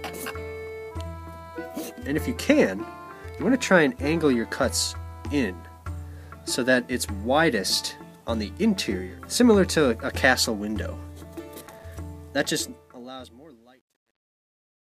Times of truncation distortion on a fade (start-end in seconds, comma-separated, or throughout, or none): 12.46-14.96